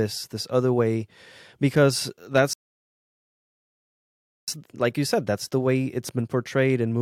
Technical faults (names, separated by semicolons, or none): rebuffering stall